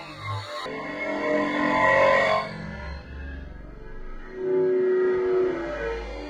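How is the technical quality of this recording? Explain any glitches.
The recording has one glitch at the very start. From 0.0 to 0.66 s, the audio is read two samples at a time, at double speed. The player treats each pair of samples as one frame, as if there were two channels. The sound runs twice as fast and an octave higher, up 12 semitones.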